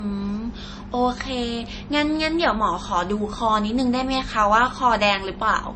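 Speech with nothing above 8.3 kHz throughout and smeared, swirly low-bitrate artefacts, likely low-bitrate audio saved at a high bitrate: a roughly 32 kbit/s MP3 re-encoded at a higher rate, not merely band-limited.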